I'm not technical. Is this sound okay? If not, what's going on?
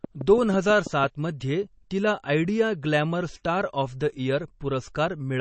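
No. MP3 compression affects the whole clip: the speech sounds watery and swirly, and everything above about 8.3 kHz is missing, so it lacks crispness. The likely cause is saving the file at a low quality setting. To make the file smaller, the encoder throws away the parts of the sound it expects you won't notice. When it discards too much, faint details flicker in and out, and the damage is plainly audible here.

A train of clicks runs from 0.04 s to 1.05 s. There are roughly seven evenly spaced ticks, about six each second, and they are somewhat louder than the speech. Because they repeat so regularly, they most likely come from electrical interference from nearby equipment, or from a faulty connection or power supply. That kind of fault adds a sharp pulse at a steady pace, so you hear a ticking laid over the sound.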